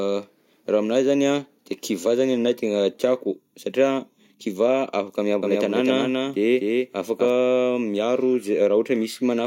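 From 5.42 s to 7.30 s the speech is joined by a doubled audio track: a second, full-band copy trails the original by roughly 300 ms, sitting around 5 dB lower. The echo carries no decay or room colour, so it reads as a clean repeat rather than reverb, and it cuts in and out abruptly at both ends. The likely cause is the same signal being captured again through a slower path and mixed back in.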